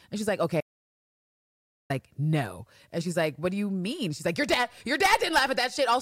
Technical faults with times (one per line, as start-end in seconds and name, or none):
0.61-1.90 audio dropout to silence